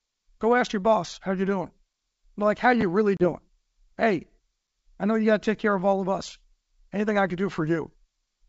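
At 2.81 s the speech stutters briefly through 2.83 s: a repeated buffer. A chunk about 11.6 ms long, which fits a 512-sample buffer, plays twice more because fresh audio arrived late, and nothing is skipped. At that size the repeats come across as a short buzzy click. A waveform shows the same tiny segment copied end to end with hard joins, and a spectrogram shows thin vertical lines at each seam.

From 3.17 s to 3.33 s there is packet loss on an ADPCM call, the G.722 link, whose 64 kbit/s coding keeps the speech wideband with at most a faint upper-band hiss. About 30 ms drops to sharp-edged silence, which points to a few lost packets. The decoder's predictor and step size then no longer match the sender's, so the speech comes back slightly distorted before settling. A spectrogram shows a clean blank column and then a smeared onset.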